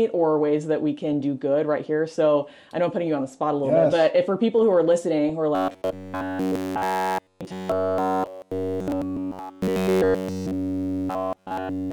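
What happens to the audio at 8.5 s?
At 8.5 s, incoming audio is likely arriving too seldom, so a buffer of roughly 10.7 ms keeps replaying from 5.55 s to the end. This is robotic sound from repeated short buffers, a rigid metallic buzz fixed at 93.8 Hz. Across the whole clip, MP2 compression starves the upper sub-bands, leaving a dull, gurgling, granular sound that fits a rate of about 80 kbps.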